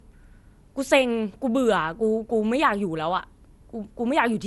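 Generation loss runs throughout the speech. Nothing sounds above 11.8 kHz, and the sound is swirly, smeared and hollow, with blurred attacks. The likely cause is about four lossy encode passes, each requantising on a shifted frame grid. The result fits MP2 at 96 kbit/s.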